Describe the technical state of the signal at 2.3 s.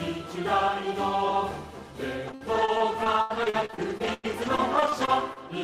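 At 2.3 s the signal is at the start of a stretch of repeated packet loss, producing a robotic sound that runs from 2.27 s to 5.38 s. Twenty gaps occur, the longest 99 ms, and each is patched by extending the preceding sound, so roughly a fifth of the span is concealment. On a waveform this shows as repeated, too-regular segments; on a spectrogram, smeared horizontal streaks and abrupt seams, heard as choppy audio with pieces missing.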